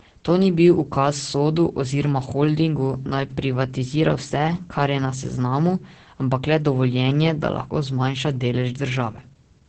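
Right from the start and all the way through, the speech carries Opus voice compression, and it's a heavy dose. Nothing comes through above about 8.6 kHz, so the top end sounds muffled, and the voice has that hoarse, slightly robotic edge you get when the linear-prediction coder handles the excitation coarsely. The damage points to a wideband SILK setup running somewhere around 10 kbps, which is starved for speech.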